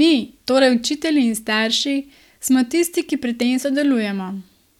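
No technical faults can be heard anywhere in it.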